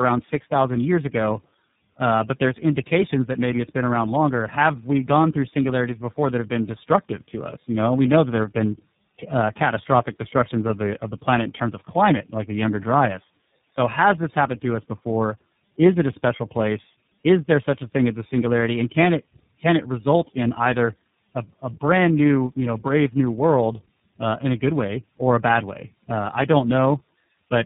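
Throughout, the speech sounds rough, muffled and warbly, with nothing above 3.8 kHz. That is tandem speech coding: three speech codecs in a row each decoded and re-encoded the last one's damaged output, which fits GSM full rate twice, then iLBC.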